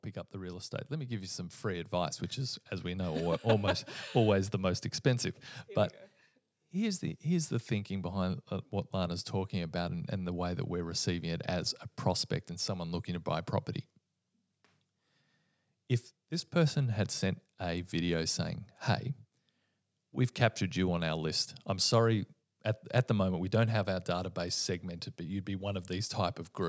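From 0.31 s to 3.3 s the level climbs steadily by about 10 dB. This is automatic gain rising: the gain control judged the input too quiet and turned it up gradually, so the speech and the background noise swell together over those three seconds. The call microphone processing caps the band at 8 kHz.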